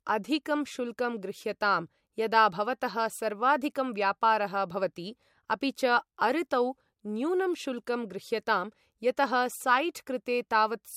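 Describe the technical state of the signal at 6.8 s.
Low-bitrate audio saved at a high bitrate, present at 6.8 s and throughout: nothing sounds above 16.6 kHz, likely from an earlier low-bitrate MP3 pass that re-encoding cannot restore.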